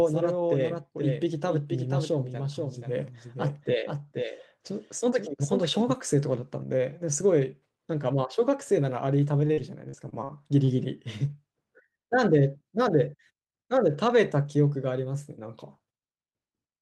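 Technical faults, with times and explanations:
0.00–5.94 s, doubled audio track: the speech is already doubled when the clip begins. A second full-band copy trails roughly half a second behind at about 5 dB below the original, so every syllable returns as a distinct, dry echo with no room tail or decay. This is likely a second capture of the same signal through a slower path being mixed back in. The copy cuts out abruptly at 5.94 s rather than fading.
9.47–10.71 s, repeated packet loss (robotic sound): six holes open in quick succession, the longest about 44 ms, adding up to about 120 ms of missing audio. Each time, the receiver extends the last decoded sound to fill the hole, which accounts for roughly 16% of this stretch. The rapid alternation of real and synthesised fragments gives the speech a choppy, robotic quality, with small pieces lost between the patches.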